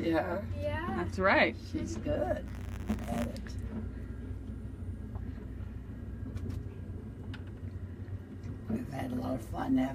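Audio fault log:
2.45–3.26 s, buffer tearing: a rattling buzz at 100 Hz rides on the sound, which fits a 10 ms buffer period. The writer and reader cross inside each period, so a small sliver of every buffer replays audio about 20 ms old, hard-joined at both edges.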